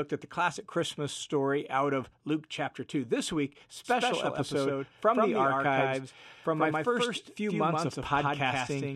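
From 3.85 s to the end, a doubled audio track appears: the speech is joined by a full-band copy about 150 ms behind and about 5 dB quieter, likely from a second capture path. It starts abruptly, sounding dry, with no decay or room colour. Each syllable shows up twice on the waveform and spectrogram, offset in time.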